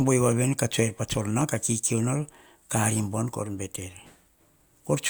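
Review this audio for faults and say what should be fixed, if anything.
At 1.41 s the speech contains a single sharp click, most likely from dropped samples: a fraction of a millisecond of audio went missing from the stream, so the waveform jumps straight from one value to a later one instead of moving smoothly between them. That sudden step is far too brief to remove any audible sound, but it produces a click and a thin vertical line across the spectrum at that instant. To prevent it, give the capture and playback path enough buffering and priority that no samples are skipped under load.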